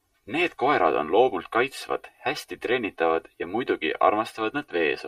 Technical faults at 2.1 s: channel delay (comb filtering)

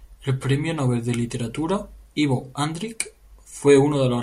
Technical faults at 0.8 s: none

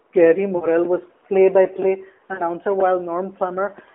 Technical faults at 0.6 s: lost AMR speech frames

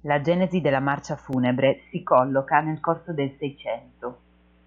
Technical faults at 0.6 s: mains hum

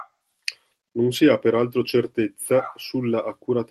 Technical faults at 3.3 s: none

